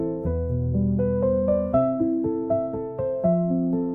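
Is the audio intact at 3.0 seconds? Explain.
Yes, at 3.0 seconds the audio is intact, with no dropout, click, distortion or other fault at that moment.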